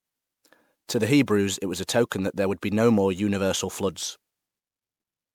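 Generation loss runs through the whole speech clip: the sound is swirly, smeared and hollow, with blurred consonant attacks, beyond what a single 128 kbit/s MP3 pass would give. The likely cause is repeated MP3 re-encoding, roughly seven passes, each requantising on a shifted frame grid so noise and spectral gaps accumulate.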